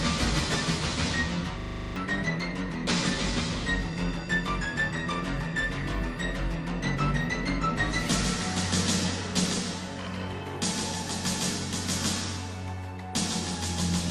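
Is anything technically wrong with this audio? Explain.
Yes. From 1.6 to 1.96 s, a system hang loop replays one 40 ms buffer nine times, giving a 25 Hz buzz. The waveform shows identical repeating cycles, the spectrogram evenly spaced vertical stripes, and about 0.4 s of audio is lost.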